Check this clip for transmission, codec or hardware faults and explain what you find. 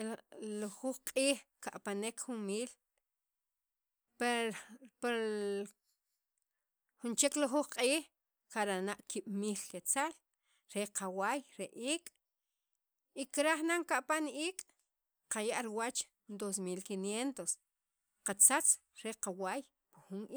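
Listening through this speech recording, nothing stood out that would point to a problem in how it was carried, encoded or captured.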